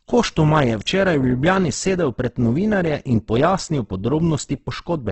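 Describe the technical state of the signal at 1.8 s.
Throughout, including 1.8 s, heavy Opus compression roughens speech into grainy, noise-filled bands with nothing above 8.2 kHz, likely from CELT coding near 12 kbps.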